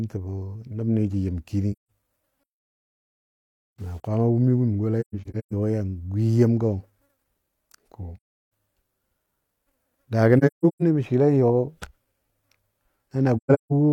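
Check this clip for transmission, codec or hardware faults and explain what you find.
Two faults appear in this speech clip: AAC frame loss with muting, and low bit depth without dither.

AAC frame loss with muting occurs at 1.72 to 1.90 s, after "nəboni jə yɨm kini". It recurs at 5.00 to 5.53 s, between "wumi wum" and "yɔ yan gwi yemgɔ", and at 8.16 to 8.22 s. It appears again at 10.38 to 10.83 s, before "mə swɨle", and at 13.37 to 13.73 s. The decoder zeroed the missing frames. The overlapping windows fade each gap out and in, so the holes are soft-edged, with the longest runs in the scattered losses about 150 ms.

From 2.43 to 4.07 s the sound turns grainy. The distortion follows the signal, with noise roughly 45 dB below it. This is likely low bit depth without dither, consistent with rounding to about 9 bits.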